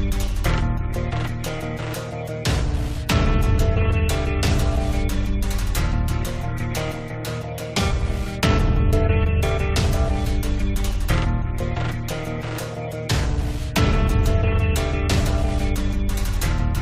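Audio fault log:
No fault found in this audio.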